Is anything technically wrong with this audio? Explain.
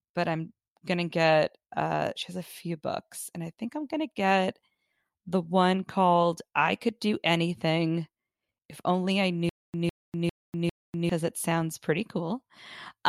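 Yes. Stutter with silent gaps, 9.49 to 11.10 s, ending just before "it sounds pretty": a 155 ms burst repeats four times with 245 ms of digital silence between, a steady 400 ms cycle. A stalled stream likely replayed its last fragment at each retry, losing the audio meant for that stretch.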